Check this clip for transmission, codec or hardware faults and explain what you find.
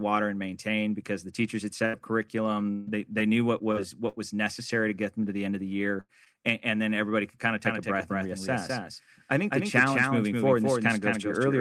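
The speech shows network packet-loss faults at several points and, from 7.65 s, a second copy of the audio.

Burst of packet loss, 1.85–1.95 s and 6.00–6.11 s: about 80 ms was concealed each time by continuing and fading the last sound, and playback resumes with roughly 80 ms of audio skipped.

Lost packet rebuilt from error correction, 1.93–1.95 s and 5.58–5.60 s: in each case one 20 ms packet was replaced by a low-bitrate in-band FEC copy, so nothing drops out, but that frame sounds rougher and noisier.

Repeated packet loss (robotic sound), 2.58–4.70 s: five gaps, the longest 143 ms, add up to about 261 ms of concealment. Each patch continues the previous sound before the next gap arrives, which produces choppy, robotic speech with pieces missing. Part of this, around a tenth of a second, was rebuilt from error-correction data.

Short concealed packet loss, 6.25–6.28 s: about 20 ms of audio never arrived and was bridged with 12 ms of extrapolated signal, which comes across as a brief smear.

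Doubled audio track, 7.65 s to the end: the audio is heard again about 200 ms later at roughly 5 dB lower, full-band and dry, and the copy starts abruptly. The likely cause is a second, slower capture path or an edit that left two out-of-step copies.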